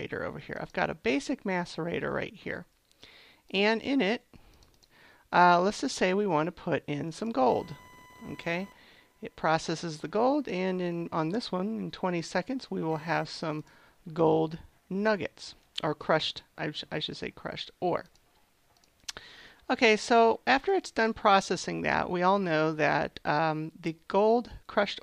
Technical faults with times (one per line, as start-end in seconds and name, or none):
7.49-13.75 computer activity noise